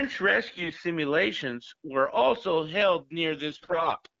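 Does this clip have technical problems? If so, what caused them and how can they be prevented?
Yes. AMR bit errors make the speech hoarse and gargly from 0.47 to 0.81 s, and harsher after "were also held", from 3.50 to 4.00 s. Weakly protected codec bits arrived flipped, scattering excitation pulses and skewing pitch and gain. A stronger radio link or better channel coding would prevent this.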